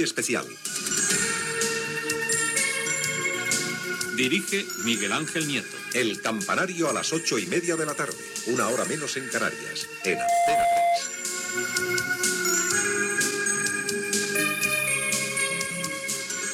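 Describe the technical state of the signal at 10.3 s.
A single piercing tone near 692 Hz is swelling to full strength here, peaking around 5 dB above the sound. This is loudspeaker feedback squeal, lasting from 10.00 to 11.04 s, as the microphone re-captures the loudspeaker and the loop gain exceeds one at that frequency.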